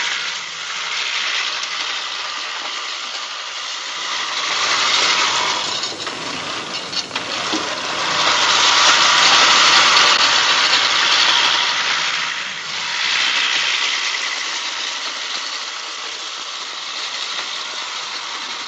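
No technical faults can be heard anywhere in this audio.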